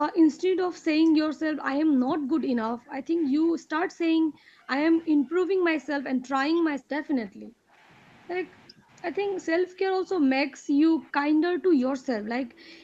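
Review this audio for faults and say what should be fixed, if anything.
Speech suppressed in double talk: the speech dips by up to about 20 dB from 0.1 to 4.7 s, 5.08 to 6.32 s, 6.48 to 7.88 s, 8.69 to 8.91 s and 9.43 s to the end. The likely cause is the echo canceller confusing the local talker with loudspeaker echo and pulling both down. Better double-talk detection or a headset would stop this.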